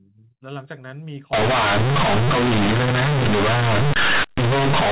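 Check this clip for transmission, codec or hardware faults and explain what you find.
There's one real fault here. From 1.33 s to the end, companded audio is being read as linear: the mu-law bytes come out as plain 8-bit samples with no expansion, so the speech turns into a harsh, very loud buzz with heavy noise in the gaps. Before that, the G.711 telephone coding sounds like ordinary band-limited phone audio.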